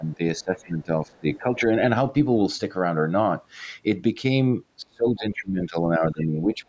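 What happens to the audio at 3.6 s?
Nothing goes wrong at 3.6 s: the speech there is intact, carrying only the normal, fault-free high-pass and roughly 8 kHz ceiling of call microphone processing.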